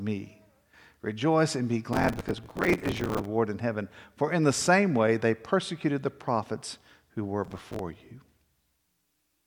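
Speech, broken twice by processor overload crackle. From 1.93 to 3.25 s, between "and be" and "in heaven for in", and again from 7.45 to 7.79 s after "the prophets who were", the processor falls behind on buffers of around 5 ms. It misses roughly a hundred deadlines in the first burst and a few dozen in the second. Each miss replays a scrap of old audio with hard edges, so the stretch takes on a gritty, tearing crackle.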